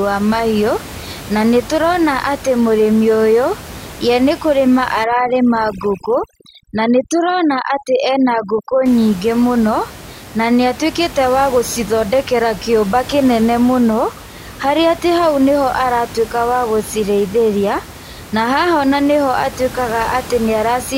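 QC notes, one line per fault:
5.04–8.86 s, overdone noise removal: the room noise, about 17 dB below the speech, collapses to near silence flecked with twinkling specks as over-strong reduction mutes individual bands near the noise estimate. Unlike a gate, it never cuts whole.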